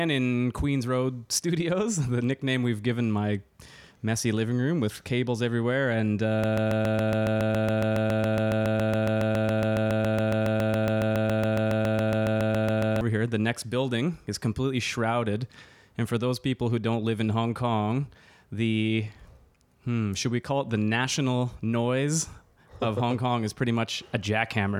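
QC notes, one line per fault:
6.44–13.01 s, broken-record loop: a 139 ms fragment of the speech repeats exactly, back to back, 47 times, producing a rapid mechanical stutter. The stream or player likely stalled and kept resending its last held fragment, so the speech due there is lost.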